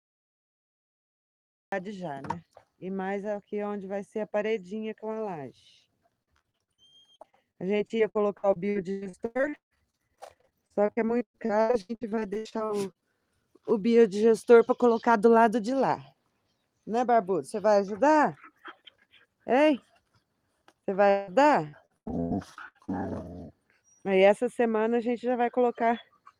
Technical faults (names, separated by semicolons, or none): cut-off start; repeated packet loss (robotic sound); long network dropout